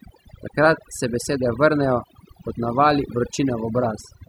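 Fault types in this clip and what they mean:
Overdone noise removal: someone ran the noise reduction way too hard on a noisy speech recording, and it shows across the whole clip. Any frequency band sitting close to what the tool decided was noise got pushed right down or switched off, and the quieter bits of the voice got caught too. So the background between phrases drops away and breaks up into little twinkly, warbling specks.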